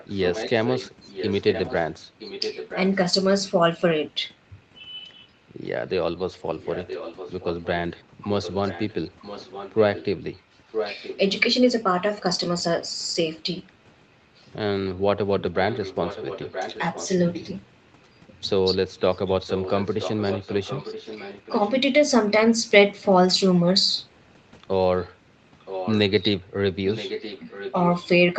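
Echo leak runs from 0.0 to 2.79 s, then at 6.59 to 7.68, 8.42 to 10.05, 10.71 to 11.19, 15.53 to 17.08, 19.4 to 21.69, 25.6 to 25.99 and 26.9 to 27.84 s. A delayed copy of the speech trails the original by about 0.97 s, mostly 10 to 15 dB down but only about 5 dB under near 10.7 s. It likely comes from a loudspeaker end whose echo canceller let part of its microphone pickup return.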